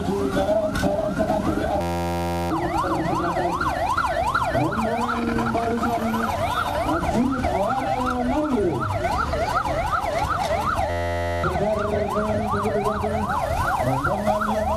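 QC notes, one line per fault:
1.81–2.51 s and 10.90–11.44 s, system hang loop: one 11.61 ms chunk, likely a stuck 512-sample buffer, repeats as an 86.1 Hz buzz, swallowing roughly 0.7 s and 0.5 s.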